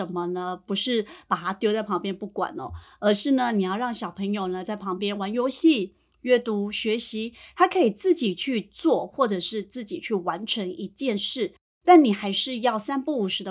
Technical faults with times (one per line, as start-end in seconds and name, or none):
none